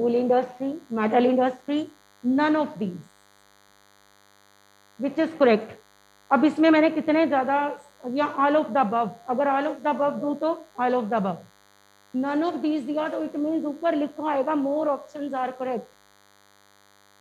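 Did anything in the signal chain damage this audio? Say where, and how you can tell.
Yes. The analogue front end picked up DECT cordless phone buzz: a nearby handset or base pulsing every 10 ms was rectified in the wiring. That leaves a thin, steady 100 Hz buzz rich in harmonics, running throughout, roughly 35 dB below the signal.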